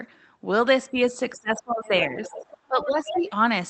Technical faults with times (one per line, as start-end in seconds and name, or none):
0.91-2.33 speech suppressed in double talk
2.24-2.53 other side's voice leaking through
2.68-3.36 speech suppressed in double talk
2.81-3.22 other side's voice leaking through